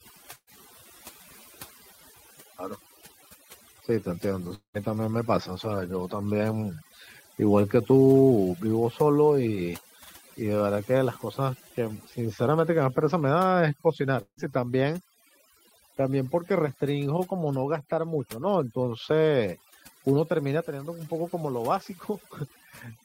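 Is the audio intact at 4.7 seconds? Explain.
No. At 4.7 seconds the sound falls inside a gap from 4.55 to 4.77 s that is most likely a long network dropout. Incoming audio stopped and the receiver extended the last sound as a fading buzz before going quiet. About 200 ms never returns. On a spectrogram the harmonics smear into a decaying haze and then a blank column. The waveform shrinks to a flat line.

Overdone noise removal also affects this moment, as it does the whole clip. Frequency bands near the estimated noise floor are cut hard, so the background drops to near silence dotted with twinkling specks. A spectrogram shows scattered isolated dots in otherwise empty regions, with the weak edges of the speech eaten away.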